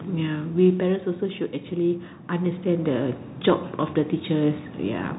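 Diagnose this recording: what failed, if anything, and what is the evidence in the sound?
Bluetooth CVSD headset codec, throughout: the speech is band-limited with nothing above 3.8 kHz, s sounds come out scratchy, and a granular hiss sits under the voice, with the codec damage plainly audible. This is the codec stage. CVSD sends one bit per sample at 64 kbps, telling the decoder only to step up or down with an adaptive step size, so fast loud high-frequency content outruns the step and distorts.

Automatic gain falling, from 0.05 to 1.13 s: the speech starts loud and then sinks by about 6 dB together with its background, a gradual slope rather than a cut. This belongs to call processing. The automatic gain control judged the opening input too hot, or its background too strong for its starting gain, and pulled its gain down over roughly a second. Because the gain is applied to the whole signal, voice and room tone drop together.

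Automatic gain rising, from 1.69 to 3.27 s: the level swells back up by about 6 dB over roughly a second and a half, with the background rising right alongside the speech. Also call processing. Having lowered its gain, the automatic gain control now found the input too quiet and raised gain gradually, so the level pumps down and then back up within the first few seconds.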